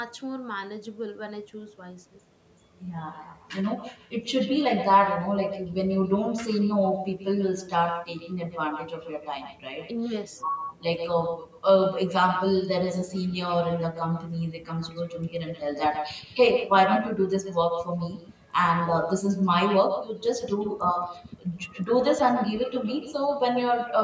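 Right through the clip there's echo with no canceller: your speech comes back roughly 150 ms later, about 8 dB down and thinner, through a call path topping out at 8 kHz.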